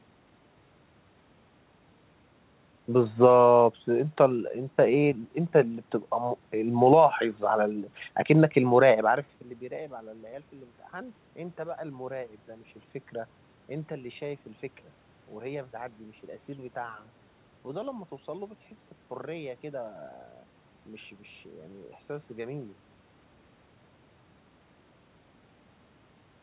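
Nothing's technically wrong with this speech recording: the room's background noise is simply part of the recording, the level shift around 9 s is just the talker changing distance from the microphone, and the call path's G.711 coding behaves as expected, with nothing above 4 kHz.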